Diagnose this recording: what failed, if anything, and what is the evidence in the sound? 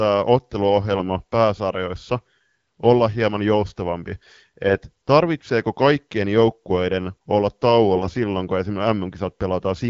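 The network stage failed with AMR bit errors from 4.66 to 4.78 s, between "olla hieman joustavampi" and "tarvitseeko kaikkien joukkueiden olla". That 0.13 s fits about six corrupted 20 ms frames, at a bit error rate of a few percent. With weakly protected bits flipped, the AMR-WB decoder (12.65 kbit/s) misplaces its excitation pulses and mis-sets gain and spectral values, so level and pitch roughly hold while the sound turns scratchy and gargly. A spectrogram shows smeared, noisy harmonics and broken formants, with a near-normal waveform envelope.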